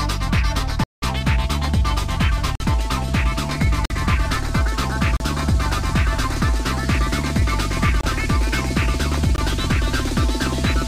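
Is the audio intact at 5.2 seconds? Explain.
No. Between 5.17 and 5.20 s there is a block of digital silence, about 36 ms long: the output received zeros instead of audio, either from a buffer left unfilled in time or from invalid calculated values. The sound drops out abruptly, leaving a short hole.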